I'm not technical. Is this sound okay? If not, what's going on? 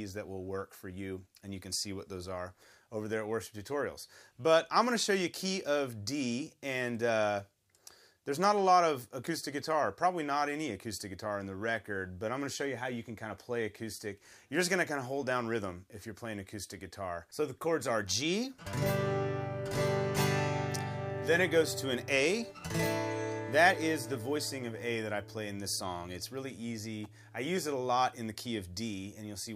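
No. At about 27.04 s there is a faint, sharp snap laid over the sound, over almost instantly. That is an electrical switching spike, most likely from a nearby switch, motor or static discharge making a tiny arc that the audio cable picked up.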